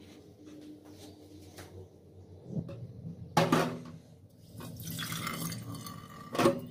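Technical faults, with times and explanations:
2.59–2.61 s, skip ahead: roughly 0.7 s of audio was dropped before it could play, so playback jumps straight forward with no gap filling the join.
2.69–3.50 s and 4.40–6.55 s, jitter buffer speed-up: an overfull buffer was drained by cutting pitch-period fragments, so the audio runs at 112% and then 111% speed at unchanged pitch, sounding hurried.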